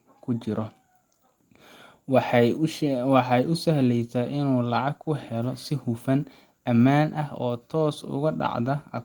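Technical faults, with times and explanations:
3.43–3.45 s and 5.05–5.07 s, lost packet rebuilt from error correction: brief rough, noisy patches with no gap. Each time one 20 ms packet was lost, and the decoder played the lower-bitrate copy that the next packet carried, which holds less detail than the original.
5.03–5.07 s, short concealed packet loss: a quick smear or wobble. The first 20 ms never arrived and was filled by extending the preceding sound. The following 20 ms was rebuilt from the error-correction copy before the audio blended back.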